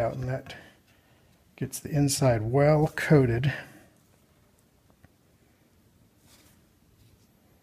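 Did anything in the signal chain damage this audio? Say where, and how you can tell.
No, nothing in the signal chain damaged this audio that I can hear.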